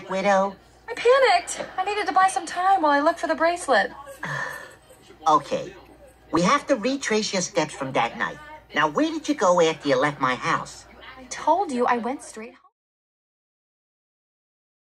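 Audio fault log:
6.37 s and 12.36 s: overlap between stream segments. At each 6 s segment boundary, non-duplicated audio is trimmed, so the waveform jumps, heard as a tiny skip.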